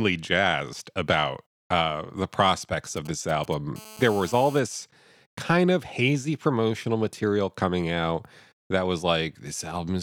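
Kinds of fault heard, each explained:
GSM signalling bursts: a nearby 2G phone's short radio bursts are rectified by the audio circuit, giving galloping ticks and brief 217 Hz buzzes just after "about uh the prospects".
GSM phone buzz: the phone, now in a call, transmits steadily at 217 bursts per second, rectified into a hard, raspy 217 Hz buzz about 20 dB below the speech.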